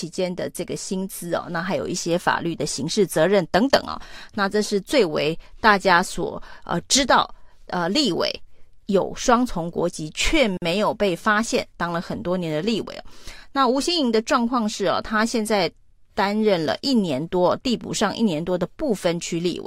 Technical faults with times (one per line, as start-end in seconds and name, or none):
10.57-10.62 gap at a join of encoded pieces